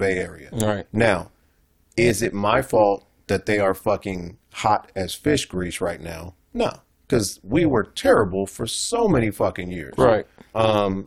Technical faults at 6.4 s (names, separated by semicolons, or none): overlap-add ripple